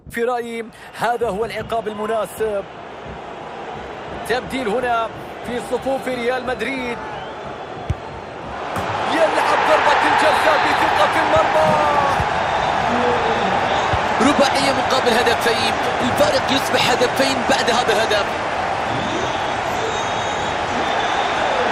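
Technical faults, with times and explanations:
11.68 s, bit error spike: A single bit flipped somewhere in memory or on a digital link, so one stored value jumped by a power of two and snapped straight back on the next. The sound points to a single corrupted sample. That instant step peaking at about −16 dBFS carries energy across the whole spectrum at once, so it comes through as one sharp, dry tick that has nothing to do with the surrounding audio.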